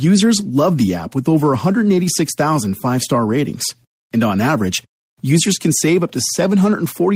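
No technical faults can be heard anywhere in the audio.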